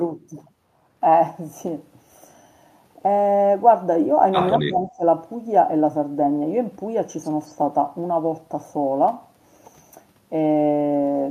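From 4.57 to 5.03 s the voice suddenly sinks, dropping by around 15 dB at its deepest and staying pulled down for most of that half second. That's speech suppressed in double talk, likely an echo canceller mistaking the talker for loudspeaker echo while both sides spoke.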